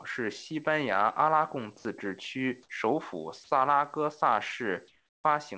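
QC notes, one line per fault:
4.88–5.24 s, comfort noise in place of the background: for 360 ms the room tone, sitting about 40 dB below the loud parts, gives way to a steady, featureless hiss about 5 dB quieter, band-limited at 8 kHz like the rest of the G.722 call. The likely cause is discontinuous transmission, with the receiver synthesising noise in the RFC 3389 style during a speech pause. Unlike a noise gate or dropout, the sound never falls to silence; its texture flattens and its level drops.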